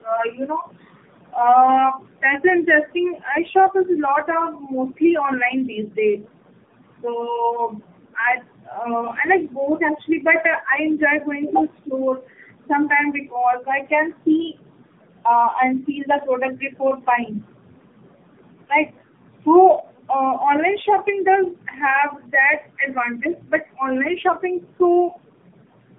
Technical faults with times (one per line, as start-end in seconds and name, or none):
0.00-25.99 tandem speech coding